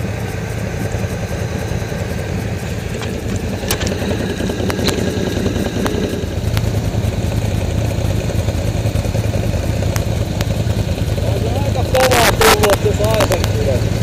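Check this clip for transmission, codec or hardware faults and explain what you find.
The clip has integer overflow at 3.71 s, 4.70–4.89 s, 5.87 s, 6.57 s, 9.96 s, 10.41 s and 11.95–13.44 s, with overdrive of about 0 to 8 dB. Loud peaks exceeded the integer range and wrapped to the opposite sign instead of being limited, producing cracks. On the waveform, peaks jump abruptly to the other polarity. A spectrogram shows broadband vertical streaks at each event.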